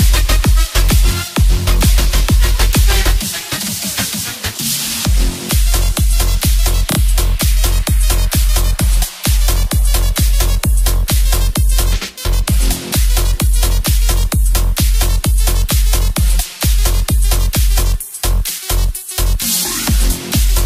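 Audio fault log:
6.91–6.97 s repeated frames: a block of about 19 ms plays twice more, causing a short stutter. This adds 58 ms.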